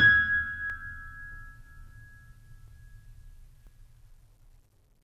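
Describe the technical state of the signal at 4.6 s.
At 4.6 s the music plays through intact, with no audible fault at that point.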